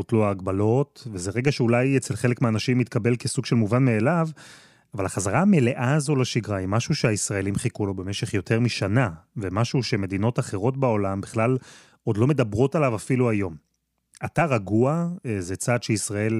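No technical faults can be heard anywhere in this speech recording, and the signal holds steady with nothing audible going wrong at any point.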